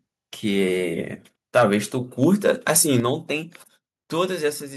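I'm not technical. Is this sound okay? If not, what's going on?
No. Twice the loudest parts of the speech turn harsh and crackly, first briefly from 1.56 to 1.75 seconds, then for longer from 2.22 to 2.96 seconds. This is microphone overload. The microphone's input was likely set too high, so the strongest peaks ran past the most the microphone's converter could handle and their tops were sliced off. That flattening is what adds the rough, buzzy edge to those syllables.

Right after that, at 3.0 seconds, the whole recording suddenly gets quieter in a single step, both the voice and whatever is behind it. This is the microphone volume being stepped down. Coming straight after the distorted stretch, it's most likely the call software noticing the overload and turning the microphone's input down on its own. It doesn't fade gradually, so the level drops noticeably and stays lower.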